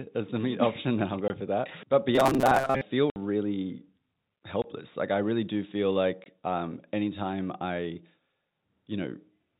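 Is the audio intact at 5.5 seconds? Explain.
Yes, the speech is intact at 5.5 seconds, carried cleanly through G.711 telephone coding with its usual band limit below 4 kHz.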